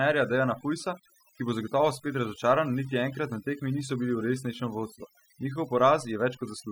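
Overdone noise removal affects the speech from start to finish. A noise reduction stage was pushed too hard. Each frequency band that drops near its noise estimate gets pulled far down or shut off. Quieter parts of the voice fall below that line and vanish with the noise. The gaps between phrases sink to near silence, dotted with twinkling specks.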